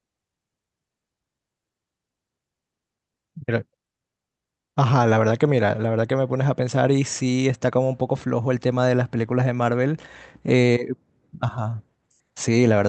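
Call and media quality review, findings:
No faults found: the speech arrives through the call path with continuous, stable level and timing, its top end rolling off at about 8 kHz, which fits a wideband Opus call.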